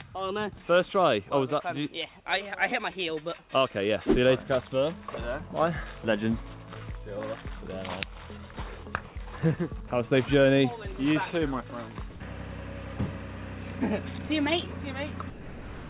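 Around 9.08 to 9.16 s and again 12.1 to 12.2 s, the background turns into flat, featureless hiss, about 2 dB quieter the first time and about 3 dB louder the second. That's likely comfort noise in place of the background from a discontinuous-transmission sender. At 9.88 s, and from 15.3 s to the end, actual sound gives way to that same steady noise, which is likely sound dropped by the voice detector. The clip's top end stops at 4 kHz, consistent with a narrowband G.711 call path.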